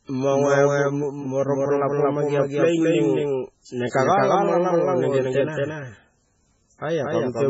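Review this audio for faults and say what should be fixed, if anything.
A doubled audio track runs through the whole speech clip: a second full-band copy trails the original by about a fifth of a second at roughly equal loudness, with no decay or room colour. This is likely an edit or capture path holding two copies out of step. Remove the duplicate path or delayed copy so only one source feeds the mix.

MP3 compression is also present throughout, with heavy codec damage: the speech sounds watery and swirly, attacks smear, and nothing reaches above 7.6 kHz. The likely cause is an MP3 encode at a very low bitrate, consistent with around 16 kbps, which forces the encoder to drop weak frequency lines frame by frame. Encode at a much higher bitrate or keep a lossless master.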